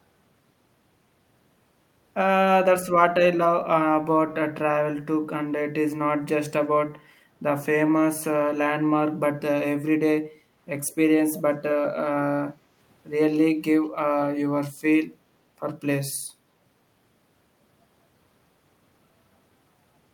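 An echo leak, likely from a loudspeaker on the far end whose echo canceller let some pickup through, appears from 10.87 to 10.95 s: a brief, very faint copy of the speech, roughly 30 dB down, trailing the original by 194 ms.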